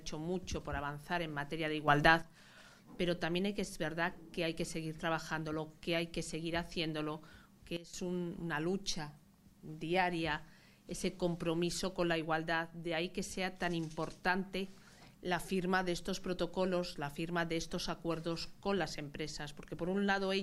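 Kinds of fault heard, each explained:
Sudden gain jump: gain was likely changed abruptly without a ramp, so sound and background noise jump together, about 9 dB up, later about 15 dB down.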